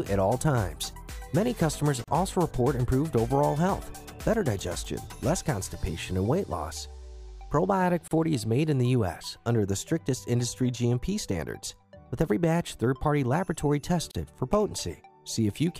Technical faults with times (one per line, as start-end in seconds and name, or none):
2.04-2.08 gap at a join of encoded pieces
8.08-8.11 gap at a join of encoded pieces
14.11-14.15 gap at a join of encoded pieces